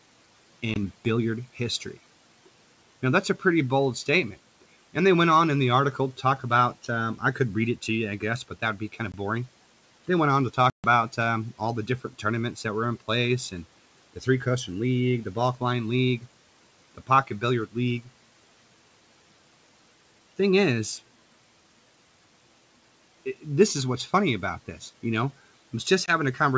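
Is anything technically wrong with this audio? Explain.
Yes. There is packet loss on an ADPCM call at 0.74, 9.12, 10.70 and 26.06 s: three 20 ms dropouts and one of 140 ms (about seven packets). Each leaves an abrupt silence. The decoder's adaptive predictor and step size lose sync with the sender's, so speech resumes distorted until they realign.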